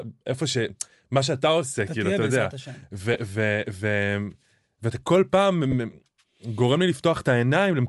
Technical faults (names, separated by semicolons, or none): Bluetooth LC3 compression; lost LE Audio frames